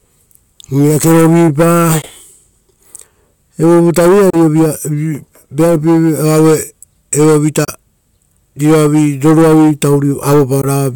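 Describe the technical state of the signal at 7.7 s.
A Bluetooth dropout sits at 7.65 to 7.69 s: the speech cuts to silence for a few tens of milliseconds, then resumes further on as if it had kept playing. The likely cause is a couple of wireless packets arriving too late and being discarded.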